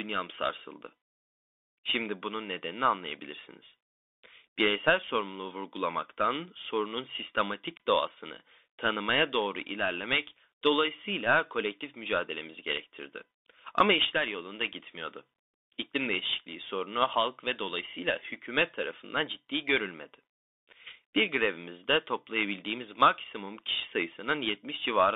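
Bluetooth CVSD headset codec, throughout the speech. The band is squeezed to roughly 300 Hz to 3.6 kHz, which fits a 64 kbps CVSD link: each sample is a single up-or-down bit tracking the waveform with an adapting step. The damage is plainly audible. Loud, fast-changing sounds outrun the step and smear into distortion, sibilants turn scratchy, and a granular hiss rides beneath the speech.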